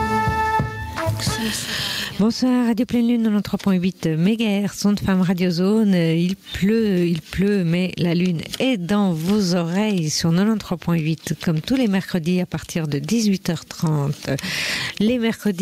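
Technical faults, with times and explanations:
Throughout, gain pumping: the input gain was likely set far too high for the microphone, leaving a fast limiter or compressor to drag the level down on every loud sound and release it again in the gaps. The level swings by roughly 15 dB. Loud and quiet passages sit unnaturally close together, so the whole clip sounds squashed and breathing.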